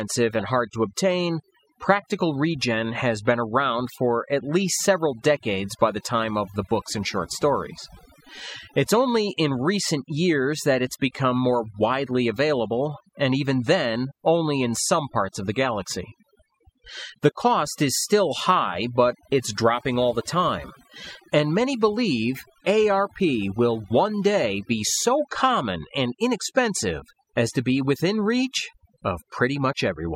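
A speech recording with overdone noise removal throughout: the reducer is set so aggressively that frequency bands near its noise estimate are pulled down or gated off. The background drops and breaks up into twinkling specks, and the quieter parts of the voice go with it. There are also four corrupt decoded frames, where damaged compressed data was played anyway and energy landed at wrong frequencies as short, low-level chirps or bursts: 0.39–0.43 s, just before "hard to obtain practical"; 3.87–3.94 s, between "practical regen has been" and "at least several decades"; 18.31–18.36 s, between "cost is" and "high but it's dropping"; and 22.40–22.43 s. Each lasts roughly two or three frames' worth of time.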